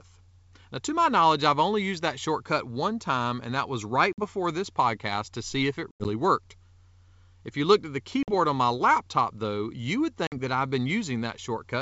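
Packet loss on an ADPCM call opens hard-edged silent gaps at 4.13 to 4.20 s (after "time and that was"), 5.91 to 6.08 s, 8.23 to 8.31 s and 10.27 to 10.39 s. About 50 ms is lost each time, and 100 ms in the second event. That second loss is scattered over 140 ms, with its longest run at 90 ms. After each hole, the receiver's adaptive predictor and step size no longer match the sender's. Speech re-enters slightly distorted until they resynchronise.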